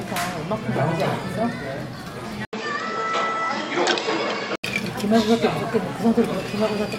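At 2.45 s the system likely switched its input to a poorer device, and it holds there until 4.64 s. The changeover leaves a gap of 80 ms of silence, then the band stops at 7.9 kHz, so the sound turns duller and boxier. Its level shifts by a few decibels, and a new background noise sits well below the signal, around 35 dB down. At 4.64 s the fuller tone returns.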